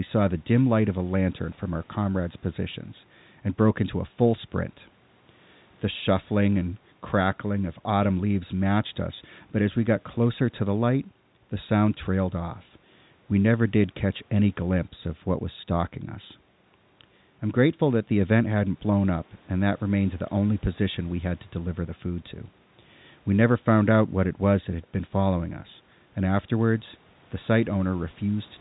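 Nothing goes wrong anywhere in this speech, which simply has the narrow sound of an ordinary phone line, with G.711 telephone coding keeping everything below 3.9 kHz and the call's microphone processing trimming the lowest bass as it normally would.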